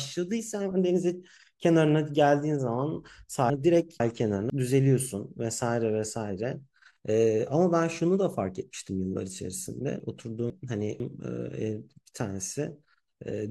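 The speech jumbles briefly at 3.5 to 4.5 s and again at 10.0 to 11.0 s. These are chunks out of order: within each second, two 500 ms blocks play swapped, one arriving a chunk late, leaving three hard joins.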